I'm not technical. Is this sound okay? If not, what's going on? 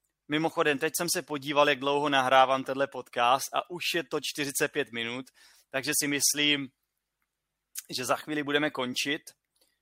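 Yes, this recording sounds fine, with no technical problems to point to. Nothing in it needs fixing.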